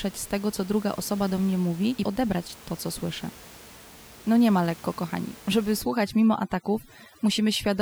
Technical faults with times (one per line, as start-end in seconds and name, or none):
5.82-7.82 overdone noise removal